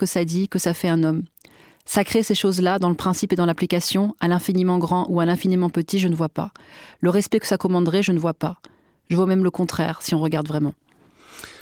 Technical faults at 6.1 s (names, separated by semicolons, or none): none